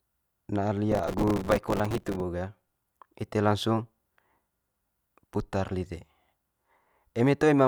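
From 0.92 s to 2.21 s the speech is overlaid with processor overload crackle, a dense gritty tearing that stops abruptly at the end of that span. The processor could not fill each short output buffer on time, and the missed deadlines came in quick succession. Each miss replayed a fragment of stale audio with hard edges. The rapid texture fits buffers of only a few milliseconds, with something like a hundred missed across the burst.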